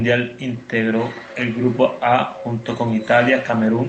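Nothing goes wrong in this bit of speech: it's just a normal call path, with the audio band topping out around 8 kHz, which fits Opus coding, and a faint room noise sitting about 35 dB under the talking.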